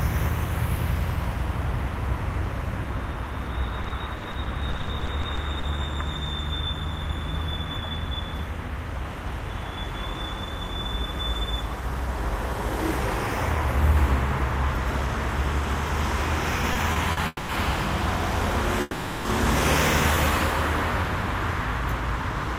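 From 3.83 to 5.65 s the everyday sound turns choppy: repeated packet loss (robotic sound), fifteen short gaps of up to 50 ms each, patched by continuing the last sound, with about 0.24 s actually lost.

Between 16.73 and 17.19 s it drags and stutters three times. These are repeated stalls (stutter), where late packets drained the jitter buffer, but nothing is missing.

At 17.27 to 17.51 s and again at 18.81 to 19.27 s the sound hangs as a fading buzz and then resumes where it stopped, adding 0.22 s and 0.44 s of delay. This call audio freeze was likely caused by packets held up in transit.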